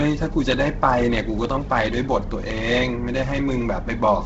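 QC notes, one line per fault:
Throughout: Bluetooth LC3 compression. Speech stops at 7.7 kHz and has a breathy, grainy edge from noise-filled upper bands. Likely a low-bitrate link near 16 kbps.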